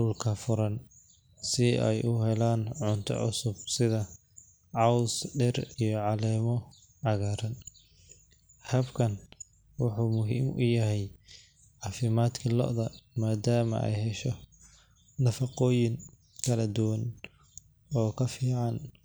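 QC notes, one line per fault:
No faults found in this speech clip. Nothing in it calls for a timed entry.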